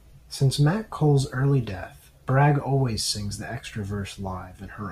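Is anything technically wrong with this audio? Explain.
No, nothing in this speech recording stands out as technically wrong; it all sounds fine.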